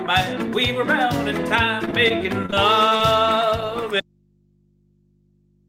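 From 1.85 to 3.01 s the sound turns choppy and robotic, a case of repeated packet loss: short holes, none longer than 29 ms, are patched by extending the preceding sound.

At 4.00 s the audio drops abruptly to a low mains hum far below normal level until the end, a dropout to faint residue, likely from a lost input.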